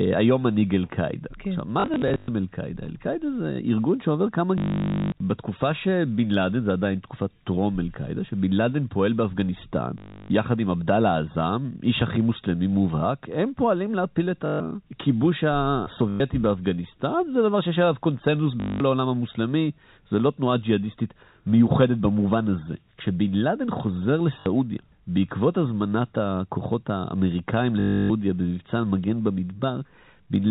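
Packet loss with last packet repeated occurs at 1.8 to 2.28 s (scattered, 260 ms lost, longest run 100 ms), 4.58 to 5.12 s, 9.98 to 10.3 s, 14.46 to 14.6 s, 16.1 to 16.2 s, 18.6 to 18.8 s, 24.4 to 24.46 s and 27.8 to 28.1 s. The receiver fills each gap by replaying the last packet that arrived. The repeats are not aligned to pitch, and longer runs buzz at 50 Hz, consistent with 20 ms packets. The result is a robotic stutter through the 4 kHz-limited telephone-band audio.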